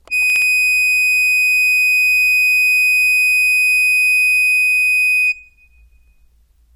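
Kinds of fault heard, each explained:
Chunks out of order: a 60 ms chunk of the music plays one chunk late, between 0.30 and 0.42 s, giving a brief jumbled moment with three hard joins.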